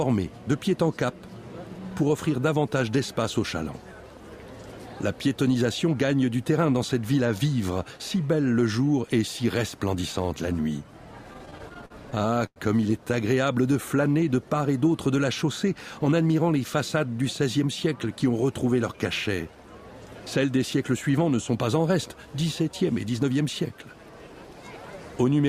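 From 11.33 to 12.58 s the audio suffers repeated stalls (stutter). Packets arrived late, so the jitter buffer kept running dry. Sixteen times the receiver held the last sound going until fresh audio came. The longest hold lasts 98 ms. Together they add 285 ms, almost a quarter of that stretch. Nothing is lost. The sound still drags and catches in a choppy, halting run.

A jitter buffer slow-down follows from 13.52 to 13.98 s. The buffer was short of reserve. The receiver rebuilt it by repeating tiny pitch-length slices. That stretches the passage by 53 ms and plays it at 90% speed. Pitch stays put. The sound seems drawn out and slightly sluggish, as if it briefly lingers.

Two jitter buffer speed-ups come later. The first runs from 16.05 to 16.27 s at 114% speed. The second runs from 23.07 to 23.31 s at 113%. Each time the buffer held more audio than it needed. The receiver trimmed short pitch-length pieces to cut the delay, about 40 ms per event. 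Pitch is unchanged. Both moments sound briefly rushed and clipped along.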